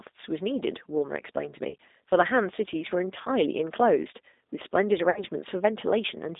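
Right from the start the whole clip runs through a G.729 codec. The band sits between roughly 250 Hz and 3.7 kHz, consistent with an 8 kbit/s G.729A stream. The speech is rebuilt from a filter, a pitch predictor and a few pulses, so it comes across plainly rough and a bit synthetic.

Then there's VoIP packet loss concealed by the speech codec, at 1.69 to 1.75 s, 3.22 to 3.28 s and 5.10 to 5.23 s. The first two lose about 30 ms each and the last about 60 ms. In each gap the decoder stretches its last pitch and filter into a buzzy tone or coloured noise that fades, and the speech stays weak briefly after.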